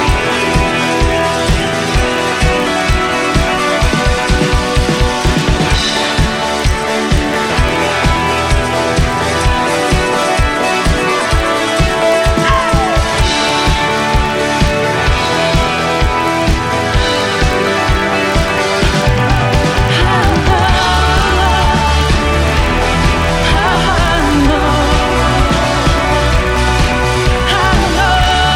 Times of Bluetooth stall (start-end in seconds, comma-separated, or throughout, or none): none